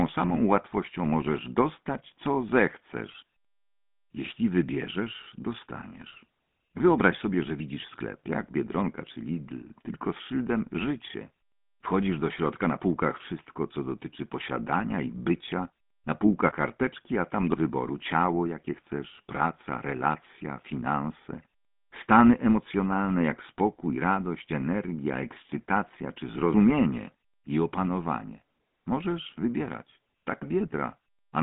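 From start to finish, the speech carries the sound of the GSM full-rate codec. This coder models the vocal tract and drives it with a regularly spaced pulse train, discarding much of the excitation detail. The result is a buzzy, gravelly roughness laid over every phrase, and the damage is plainly audible. The band is telephone-narrow, roughly 150 Hz to 3.5 kHz, with nothing above 3.8 kHz. The coarseness fits a 13 kbps rate.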